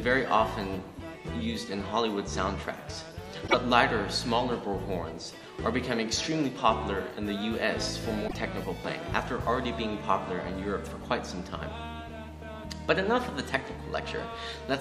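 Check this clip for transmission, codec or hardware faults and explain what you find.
Two short faults, both from damaged data in a compressed stream, at 3.44 to 3.55 s and again at 8.24 to 8.35 s, each about 0.11 s long. Corrupted bytes in the encoded stream left the decoder unable to read those frames correctly, so it lost sync and had to hunt for the next valid frame header before normal decoding resumed. Each gap comes out as a brief chirp, squawk, click or short hole that breaks into the sound.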